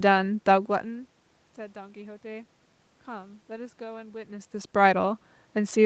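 No technical faults can be heard in this speech recording. Nothing sits above about 8 kHz, as expected from a call path at that bandwidth, and the level shifts around 0.5 s and 4.0 s sound like the talker moving relative to the microphone against the room background.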